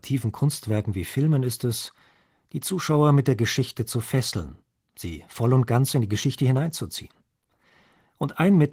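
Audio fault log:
Throughout: Opus voice compression. The speech sounds hoarse and slightly robotic, which points to hybrid SILK-plus-CELT coding at around 16 kbps.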